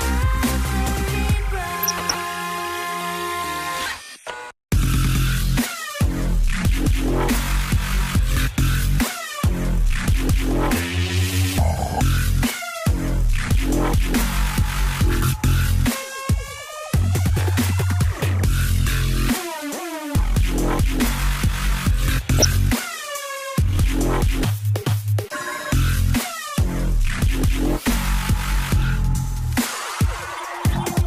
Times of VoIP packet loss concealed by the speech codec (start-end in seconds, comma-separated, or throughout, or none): none